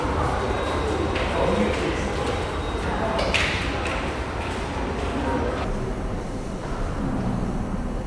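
A recording of sounds that, from 5.64 s to the end, suffers a wrong sample rate fault. The audio suddenly runs at half speed and drops a full octave, 12 semitones, with timing and pitch shifting together rather than independently. That coupling shows the samples are being clocked out too slowly with no rate conversion, which fits material captured at 44.1 kHz being played back at roughly 22 kHz.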